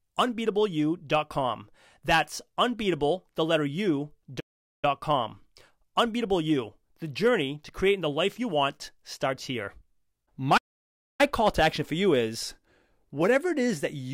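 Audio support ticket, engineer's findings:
Playback stall, 4.39 to 4.85 s: speech cuts out mid-flow, clean silence of about 0.43 s, then resumes. Likely cause: player buffer underrun or blocked output thread.

Playback stall, 10.57 to 11.21 s: same symptom, silence of about 0.62 s, speech returns on "call to action for".

Distinguishing point: these are long, hard silences, unlike the short gaps of packet loss or device dropouts.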